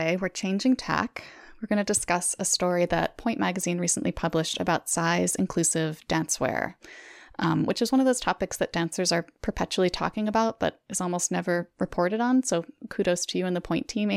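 No technical faults are audible.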